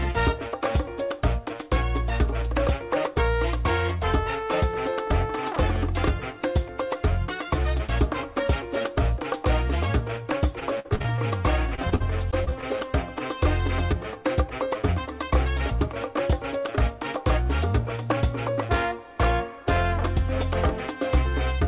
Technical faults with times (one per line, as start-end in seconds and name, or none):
10.60-11.19 repeated packet loss (robotic sound)
11.75-12.64 repeated packet loss (robotic sound)